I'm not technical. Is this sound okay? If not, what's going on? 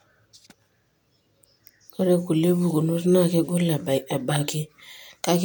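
Yes, nothing in this speech recording points to a technical problem with the audio signal.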